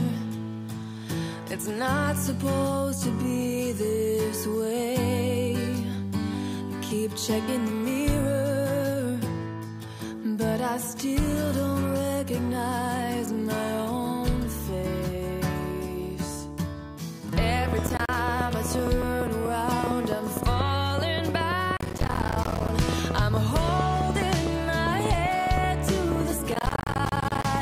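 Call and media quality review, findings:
Train of clicks, 17.68–27.56 s. Irregular ticking at about 7.9 per second, roughly 70 clicks peaking about 15 dB over the sound, audible in pauses too. Likely interference pickup or a struggling interface injecting near-identical pulses.

Processor overload crackle at 17.87–18.15 s, 21.77–22.69 s and 26.52–27.45 s. Gritty tearing from runs of missed deadlines, each late buffer replaced by a hard-edged silent gap. Gap size fits a buffer of around 10 ms. The longer two bursts have several dozen dropouts.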